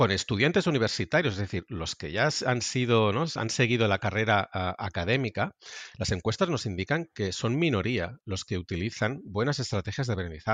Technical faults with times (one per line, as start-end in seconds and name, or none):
none